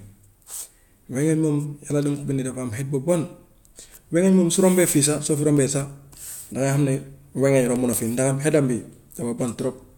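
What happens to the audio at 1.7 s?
Nothing goes wrong at 1.7 s: the speech there is intact, with no dropout, click, distortion or other fault.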